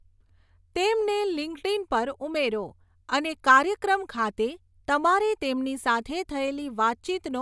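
No technical faults to report anywhere in the speech recording.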